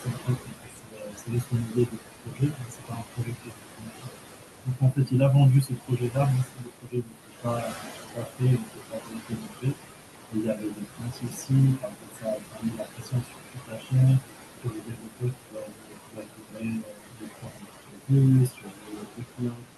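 A noise suppressor runs through this speech clip, pulling what it treats as steady background down by about 20 dB frame by frame, so the noise sinks between phrases and swells back under them. The room noise sits only about 9 dB below the speech. The same noise suppressor artifacts extend to speech cut by the noise suppressor, with quiet speech judged as noise and dropped by about 21 to 22 dB at 0.00–4.11 s, 4.65–5.21 s, 5.63–9.79 s, 10.30–14.25 s, 14.61–18.11 s and 18.48 s to the end. Roughly three seconds of each long stretch and about a third of a second of the 4.65–5.21 s one sound swallowed and faint.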